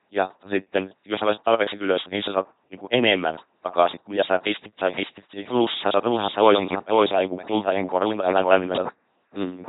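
From the start and through the whole clip, the speech has passed through an LPC-10 vocoder, which fits a 2.4 kbit/s stream. Each frame is rebuilt from a ten-pole filter driven by either a buzz pulse train or noise, so the voice is a heavily damaged, mechanical robot buzz, with hiss and buzz swapping wherever the voiced or unvoiced choice goes wrong. A spectrogram shows rigid, evenly spaced harmonics, smeared formants and nothing above 3.9 kHz.

From 4.78 s to 8.88 s, right after "kuin mitä sä pistit", a doubled audio track appears. A second full-band copy runs about half a second behind, roughly 5 dB quieter, with no decay or room colour. It likely comes from the same signal reaching the mix twice through a slower path. It cuts in and out abruptly. The waveform shows a lagging replica of each burst, and the spectrogram shows the same band-limited pattern repeated and offset in time.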